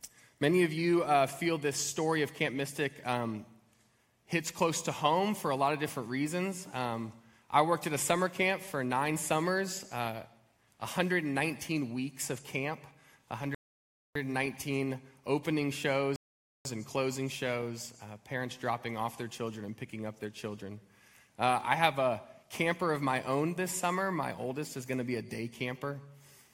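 At 13.55 s the audio stops dead for about 0.61 s, then again at 16.16 s for about 0.49 s: a rebuffering stall, the player starving for data. Unlike a dropout, nothing is skipped. Each resumes exactly where it halted, only adding time.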